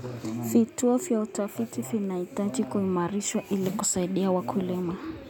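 Nothing in the speech stood out as a technical fault on listening.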